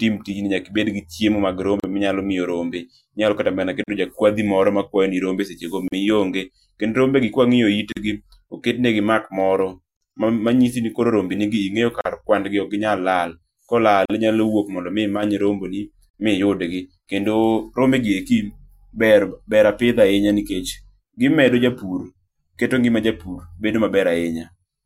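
Short holes of silence cut into the speech every 2 seconds, at 1.80, 3.84, 5.88, 7.92, 9.97 (between "oketnegi mark moro" and "manyisi ni"), 12.01 and 14.05 s. Each lasts about 43 ms (the first 37 ms) with softened edges, and the speech resumes exactly where it stopped. These are gaps at the joins of encoded pieces: the audio was encoded in separate 2-second segments and joined untrimmed, so each encoder's start-up delay and padded final frame remain as silence.

From 15.17 to 15.23 s, just before "rombegi ma iyudgi kendo", the level drops abruptly by about 6 dB for roughly 60 ms. This is likely one channel dropping out, with the remaining channel carrying the mono sum alone.

The join gaps continue at 16.10 s, just before "ma iyudgi kendo rombe", with the same silence of about 43 ms.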